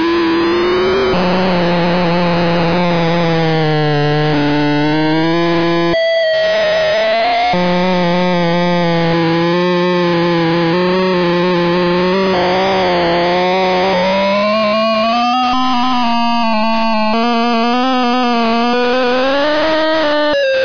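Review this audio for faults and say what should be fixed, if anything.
No faults; nothing to fix.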